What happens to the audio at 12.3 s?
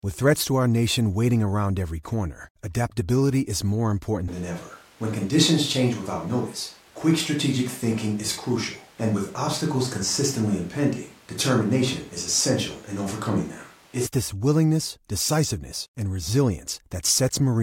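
At 12.3 s the speech is still inside a switch to a distant microphone, which runs from 4.28 s to 14.06 s. The voice sounds roomy and hollow, with thinner bass. Its loudness stays about the same. A layer of room noise sits roughly 30 dB below the speech. The change in and out is abrupt. The likely cause is that the close microphone dropped out, leaving only a pickup farther from the talker.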